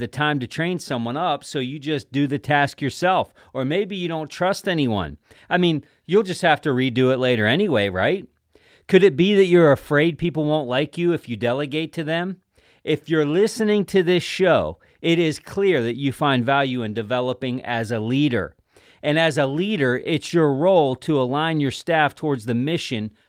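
No technical faults are audible anywhere in the speech recording.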